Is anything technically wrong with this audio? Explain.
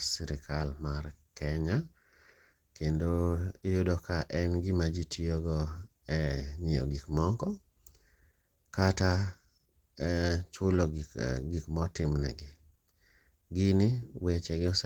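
Yes. Throughout the speech, the sound points to likely Opus compression at a low rate, fitting about 16 kbps in the hybrid speech mode, where starved bands are filled with folded or noise content. The damage is plainly audible: muffled, hoarse and grainy.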